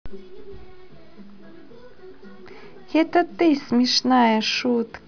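No audible faults in this speech.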